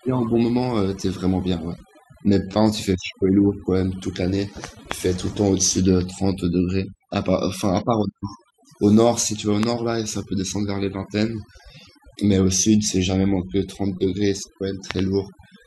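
Overdone noise removal runs through the whole speech clip. The denoiser was set so hard that any frequency band near its noise estimate is pushed down or cut, taking the quieter parts of the voice with it. Between phrases the background falls to near silence with small twinkling specks. On a spectrogram the gaps look almost black except for scattered isolated dots, and the speech harmonics appear patchy, with holes where weak components were removed.

A loud pop lands from 4.92 to 4.94 s, peaking roughly 20 dB above the speech. Another follows from 9.63 to 9.65 s, roughly 15 dB above. Then two pops in quick succession fall between 14.91 and 15.01 s, again roughly 20 dB above. The speech continues underneath each one. These are likely voltage steps or pulses, such as from a plug, a switch or static. On the waveform each shows as a sharp, narrow spike standing well above the speech envelope. 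On a spectrogram each is a thin vertical line running across all frequencies.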